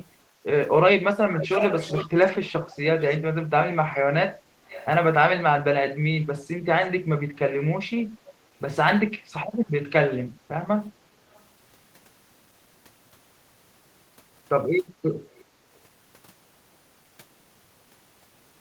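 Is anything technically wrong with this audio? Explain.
Yes. From 0.28 to 0.44 s, background gated by the echo canceller pulls the room sound down by about 8 dB for roughly 150 ms, a brief dip rather than total silence.

Echo leak appears at 1.33–2.09, 2.43–3.17, 4.66–4.86, 8.28–8.32, 11.34–11.40 and 15.28–15.41 s. It is a distinct copy of the speech trailing by 368 ms, not a reverberant smear. The first is strong, about 5 dB below the speech, and the later ones are faint, around 20–35 dB down. The likely cause is a far-end canceller passing loudspeaker pickup back.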